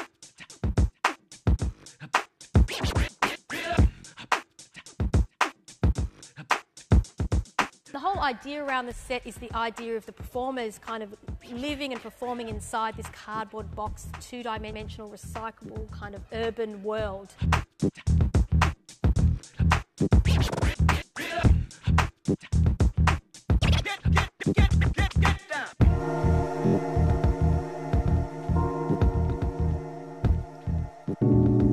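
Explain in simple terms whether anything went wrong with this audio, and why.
Yes, three short stutters from repeated frames: at 14.72 s a 0.12 s stretch plays twice, at 20.53 s a 0.05 s stretch plays three times, and at 26.66 s a 0.02 s stretch plays four times. Compressed chunks were duplicated, so the audio briefly loops.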